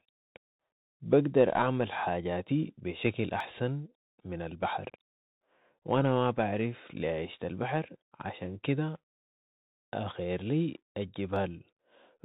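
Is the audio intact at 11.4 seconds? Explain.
No. At 11.36 s the speech skips abruptly, a sliver of about 20 ms gone with the sides butted together. This is likely audio missing between chunks, at a 4-second chunk boundary. The same moment also carries the Bluetooth CVSD headset codec's scratchy, hiss-laden narrowband sound with nothing above 3.8 kHz, from a one-bit up/down coder whose adaptive step lags sharp high sounds.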